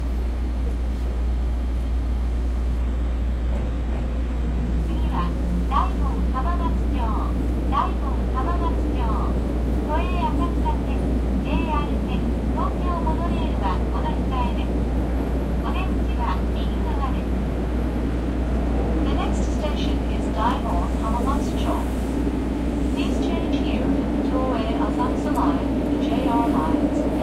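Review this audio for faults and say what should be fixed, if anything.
Between 2.79 and 4.79 s the sounds turn dull, nothing above 12.3 kHz, with no gap. That's the adaptive stream at a lower bitrate, which sounds like a switch to a low-rate HE-AAC version. To prevent it, capture from a local file or pin the stream to its top rendition.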